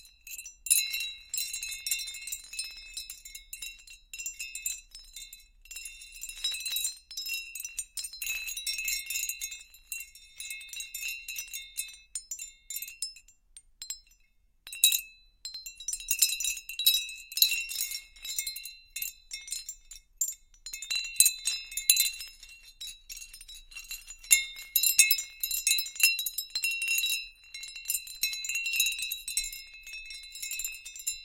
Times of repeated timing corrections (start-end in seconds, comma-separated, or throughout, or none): none